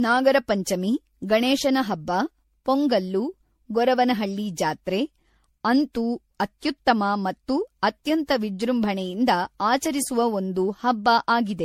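Speech, and the whole thing has that swirly, hollow, smeared quality you get from generation loss, likely from being run through MP3 encoding and decoding around ten times over. Each pass requantises on a shifted frame grid, so the noise piles up, and consonant attacks blur. The bandwidth stops at 16.5 kHz, and the grain points to something like a 64 kbit/s MP3 chain, though it sounds worse than that bitrate alone would.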